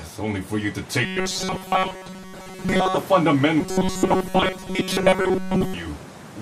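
From 1.04 to 2.97 s, and again from 3.60 to 5.74 s, the audio goes robotic with a hard metallic buzz at about 188 Hz. That's the classic robotic sound from repeated short buffers: new audio likely arrived too slowly, so the playback kept looping a slice around 5.3 ms long, and the loop rate sets that fixed pitch. Most of each stretch is repeats, with the real audio skipped and only roughly tracked underneath.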